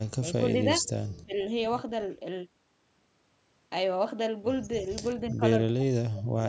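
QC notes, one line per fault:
0.21–0.85 s, 1.25–1.38 s, 5.31–5.42 s and 5.75–6.43 s, speech suppressed in double talk: the echo canceller likely mistook the near talker for loudspeaker echo while both sides spoke, so the speech dips by a few decibels, then gaps deeply, nearly cutting out near the end.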